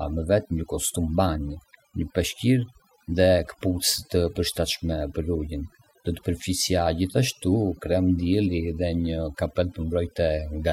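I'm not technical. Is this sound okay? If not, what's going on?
No. Overdone noise removal runs through the whole recording: the background noise was scrubbed so hard that faint parts of the voice went too, leaving watery twinkles rather than steady noise.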